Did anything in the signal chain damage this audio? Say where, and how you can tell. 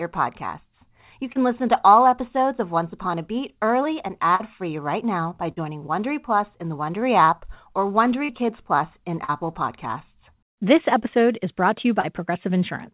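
Yes, the damage is on the network side. Short concealed packet loss occurs at 1.32 s (just before "listen to all episodes"), 4.35 s, 8.25 s (after "app or"), 9.24 s and 12.00 s. Each time about 40 ms of audio is missing, patched by around 30 to 40 ms of continued sound, so it is heard as a quick smear rather than a click.

A burst of packet loss at 5.52 to 5.60 s differs from those. The fill runs about 50 ms and its level fades as the gap continues, becoming a held buzz or dwindling hiss. Playback then resumes further along, leaving a skip. The G.711-style telephone band, with nothing above 4 kHz, runs throughout.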